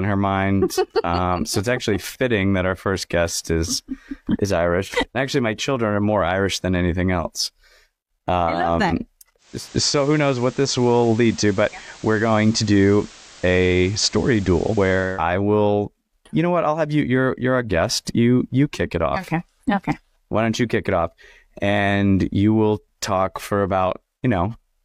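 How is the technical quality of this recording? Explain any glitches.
There is one glitch, digital radio blending to analogue. From 9.37 to 15.25 s, just after "I love um", the receiver loses the digital stream and cross-fades over 312 ms to the station's FM broadcast, then back. Hiss rises to roughly 25 dB below the speech and the level shifts about 1 dB. Unlike a dropout, the sound never stops.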